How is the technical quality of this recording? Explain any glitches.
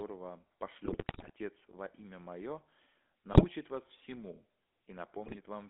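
The speech has poor technical quality: it carries GSM full-rate codec coloration throughout, and three bursts of GSM bit errors break it up.

The GSM full-rate codec confines the speech to a narrow phone band of roughly 300 Hz to 3.5 kHz, which fits a 13 kbps GSM stream. Its coarse pulse-train excitation gives a constant buzzy, gravelly roughness. Because this is steady rather than intermittent, it differs from packet-loss artefacts.

GSM bit errors strike at 0.84–1.31 s, 3.32–3.45 s and 5.26–5.37 s. Corrupted filter, pitch and gain parameters distort the spectrum and level frame by frame, producing squawks, pops and gargling. Unlike clean dropouts or concealment gaps, the sound keeps going but turns garbled.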